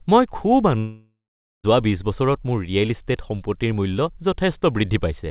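At 0.78 s the speech smears into a fading buzz, then goes quiet until 1.66 s and resumes with about 0.86 s missing, likely a long network dropout.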